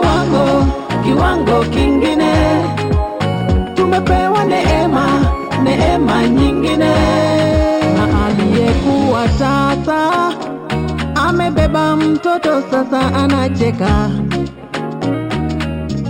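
Imaging from linear upsampling runs throughout: the top is dulled, and faint mirror copies roughly 30 dB down add metallic shimmer, which fits straight-line interpolation from 12 kHz to 44.1 kHz.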